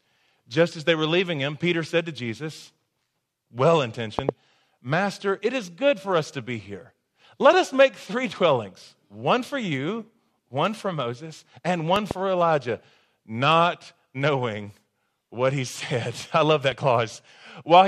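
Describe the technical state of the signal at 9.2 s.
At 9.2 s the signal is intact, with no audible fault at that point.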